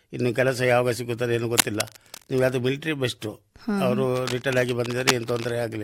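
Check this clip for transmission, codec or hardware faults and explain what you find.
Cable scratch noise occurs twice in this speech, from 1.57 to 2.49 s and from 4.16 to 5.51 s. Both are dense, ragged rustling bursts only slightly below the speech, most likely from a worn cable or connector being moved. Its irregular, gritty texture distinguishes it from steady hiss or single clicks.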